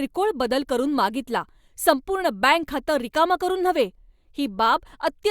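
No technical fault can be heard anywhere in this speech recording.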